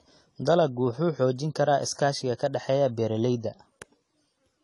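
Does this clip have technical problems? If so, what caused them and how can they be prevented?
Yes. The speech is dull and smeared from start to finish. Nothing is heard above 11.5 kHz, and the codec damage is plainly audible. Sibilants turn fizzy and sustained sounds warble. This is likely AAC compression, with AAC-LC working at a low bitrate that fits about 32 kbps. The encoder sheds the top band and quantises the remaining frequency lines coarsely. To prevent it, encode at a higher bitrate or keep an uncompressed master.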